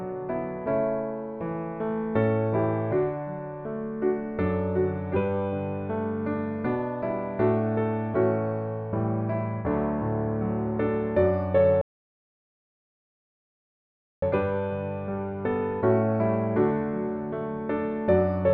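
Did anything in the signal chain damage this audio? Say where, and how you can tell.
Yes, at the playback stage. A rebuffering stall runs from 11.81 to 14.22 s. The sound drops to silence for 2.41 s, then picks up exactly where it stopped. The player's buffer emptied and waited for more data. Nothing is missing, but time is added.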